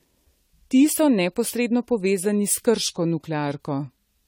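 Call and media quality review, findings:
Generation loss, throughout the speech. Swirly, hollow, smeared sound; consonant attacks blurred. Likely repeated AAC-LC re-encoding, about seven passes at what sounds like 64 kbit/s, each requantising on a shifted frame grid. Spectrogram: hard ceiling at 17.2 kHz, patchy holes and smeared transients below.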